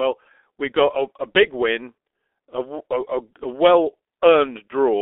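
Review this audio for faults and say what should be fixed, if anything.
G.723.1 codec damage runs throughout. Band spans 300 Hz to 3.5 kHz. Heavy artefacts suggest roughly 6 kbit/s. Speech sounds muffled and hoarse. Use a wideband codec at a higher bitrate.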